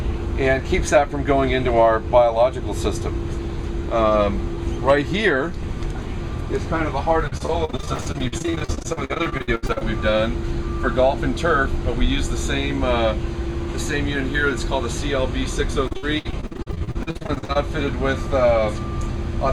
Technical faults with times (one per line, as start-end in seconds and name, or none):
7.27-9.82 repeated packet loss (robotic sound)
15.87-17.57 repeated packet loss (robotic sound)